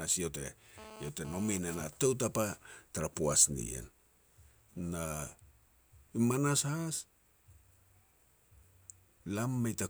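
From 0.78 to 1.84 s, before "tou tapa tara poaj", a GSM phone buzz rasps at about 17 dB below the speech: a nearby handset's 217 Hz data bursts, rectified by the circuitry. Unlike smooth 50 or 60 Hz mains hum, it is harsh, harmonic-rich and intermittent.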